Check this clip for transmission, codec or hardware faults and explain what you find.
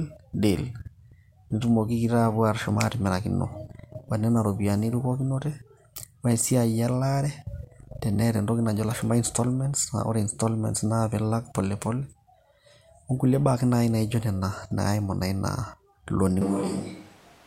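There's one fault, right at the tail. From 16.41 s to the end, the speech switches to a distant microphone: it suddenly turns roomy and hollow, loses its low end, and background noise comes up to roughly 25 dB below the speech. The overall level hardly shifts. The likely cause is that the close mic dropped out and the recording fell back to one further from the speaker, such as a camera mic.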